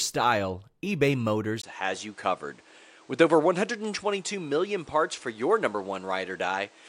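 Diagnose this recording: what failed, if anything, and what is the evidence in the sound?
At 1.62 s the sound drops out for 20 ms. From there to the end, nothing is present above 10.1 kHz, and a new background noise sits roughly 30 dB below the signal, while the overall level stays essentially unchanged. That points to the capture stage at the driver: the input was likely switched to a poorer device. The new device passes a narrower band and brings its own noise floor, and the brief gap marks the handover.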